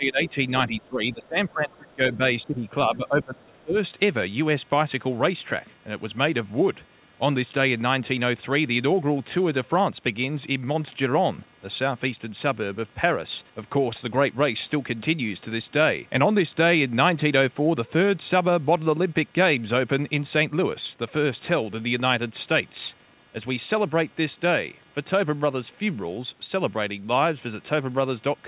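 Throughout the speech runs computer activity noise: a faint buzz pulsing roughly 200 times a second, about 35 dB below the voice. It comes from processor or graphics load disturbing the shared audio ground, and shows on a spectrogram as a thin comb of harmonics beneath everything, rising and falling with the computer's activity.

The speech is also suppressed in double talk, at 0.0 to 0.37 s, 0.67 to 2.2 s, 2.45 to 2.66 s and 2.86 to 3.76 s. The voice ducks by around 15 dB in the shorter spans and by about 25 dB in the longer ones, likely because the echo canceller confused the talker with loudspeaker echo while both sides spoke. The waveform shows sudden hollow dips in the envelope.

In and around those stretches, the other side's voice leaks through at 1.73 to 1.93 s, 2.13 to 2.17 s and 2.65 to 2.69 s. These are faint scraps about 30 to 40 dB down, likely echo that the canceller left behind. 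They appear as brief, weak smudges of energy sitting in the gaps of the ducked voice.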